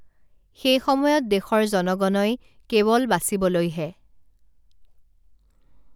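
A speech recording with no audible technical faults.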